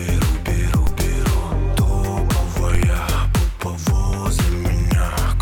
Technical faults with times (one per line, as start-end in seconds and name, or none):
0.87 DC step
2.75 DC step